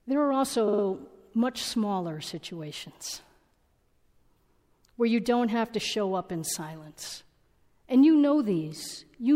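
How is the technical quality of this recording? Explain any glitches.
There's one clear glitch: a stutter of repeated frames early on, from about 0.67 to 0.83 s. A short chunk of the encoded speech, roughly 52 ms long and consistent with a two-frame block, got written or sent again, so the decoder plays it three extra times. You hear that slice of speech stutter, and the recording ends up about 157 ms longer than it should be.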